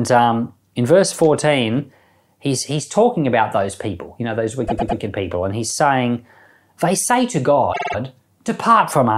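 At 4.66 s, repeated frames: a 104.5 ms block replays three extra times through 4.98 s, a stutter, adding 313.5 ms. At 7.72 s, a 52.2 ms block repeats four extra times until 7.95 s, adding 209 ms.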